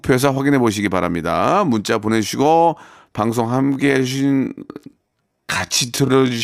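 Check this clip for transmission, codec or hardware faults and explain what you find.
One fault: a time-stretched section runs from 3.44 s to the end of the clip, where the speech slows abruptly to about 0.57 times its original pace while the pitch stays put. This was likely done by software padding the audio to a target length, repeating short fragments to fill time. The stretched stretch drags. On a spectrogram, harmonics stay at the same heights but syllables elongate, and the waveform shows repeated, doubled-looking grains.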